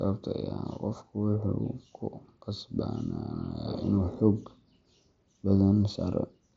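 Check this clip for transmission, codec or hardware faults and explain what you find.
No transmission, codec or hardware faults are audible; the speech arrives as expected over the mSBC Bluetooth headset path, with nothing above about 7.7 kHz and only the light graininess that codec leaves on louder sounds.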